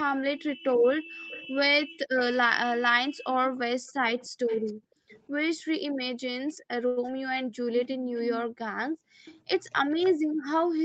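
From 0.03 s to the end at about 11 s, the echo canceller was likely unable to tell the near talker from the loudspeaker echo while both sides spoke at once, and it turned everything down. This speech suppressed in double talk makes the talker's level sag and return throughout. At its deepest the drop is around 40 dB, which leaves parts of the voice nearly gone. The voice stays within the 8 kHz band of the Opus call path.

Alongside this, an echo leak appears at 0.73 to 2.2 s, 3.57 to 5.22 s, briefly at 6.48 to 6.53 s, and again from 7.77 s to the end. The likely cause is a loudspeaker on one end whose canceller let part of the microphone pickup go back down the line. It is heard as a copy of the voice trailing by about 0.31 s. That copy sits about 20 dB under the speech in the first two stretches and is a faint scrap, about 35 dB down, at 6.5 s. In the last stretch it rises to about 10 dB below.

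At 6.87 to 6.99 s a packet arrived late and the jitter buffer ran dry. The receiver held the last sound for 93 ms until the data came, then resumed from the same point, so nothing is lost. This short stall from a late packet is heard as a sound hanging on too long with a slight buzzy dip, and the delay grows by the same 93 ms.

At 7.07 to 7.09 s, 20 ms of audio never reached the decoder in time. The receiver patched the gap by extending the preceding sound and then blending back into the real signal. This short concealed packet loss comes across as a tiny smear or wobble in the voice, and a short consonant there may drop out.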